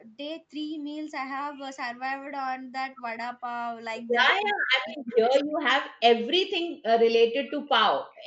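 From 4.32 to 5.45 s the speech dips hard, by about 40 dB at worst, for roughly 0.7 s in pieces. That's speech suppressed in double talk, likely the canceller ducking everything while both sides talked. Inside that, from 4.87 to 5.15 s, a faint echo leak comes through, a copy trailing 187 ms behind and roughly 25 dB down, likely a loudspeaker echo the canceller didn't fully remove.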